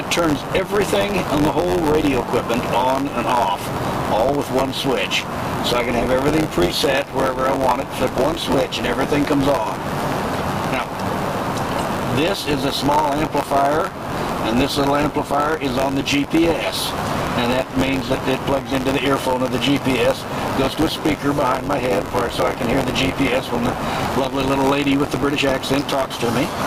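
The audio has gain pumping throughout. The gain ducks by about 15 dB under each loud sound, likely from far too much input gain feeding a fast limiter. On a waveform, the peaks look flattened and the quiet stretches rise toward them. Buffer tearing also runs the whole length as a robotic buzz at 93.8 Hz, present only while there is signal. That rate fits a 512-sample buffer. About a tenth of each period repeats audio from roughly 20 ms earlier, with hard joins that show as evenly spaced vertical lines on a spectrogram.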